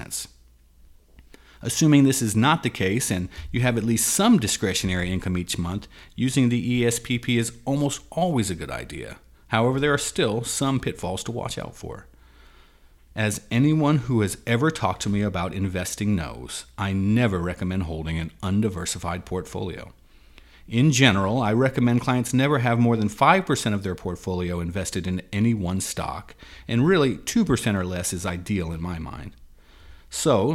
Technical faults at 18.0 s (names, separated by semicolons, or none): drift correction step